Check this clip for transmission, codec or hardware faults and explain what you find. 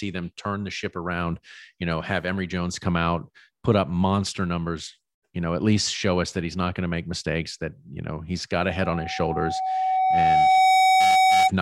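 One hardware fault is present. Loudspeaker feedback squeal runs from 8.68 to 11.51 s, right after "you know he's got". The microphone is hearing its own loudspeaker, and at 756 Hz the loop gain passes unity, so that tone feeds itself, swelling over roughly two seconds into a steady howl about 10 dB above the speech.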